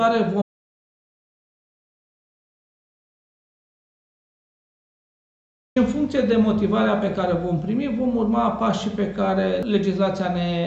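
From 0.42 to 5.76 s the audio drops out to silence for about 5.3 s, an audio dropout to silence, likely a lost input link. Unlike a quiet passage, no room tone remains.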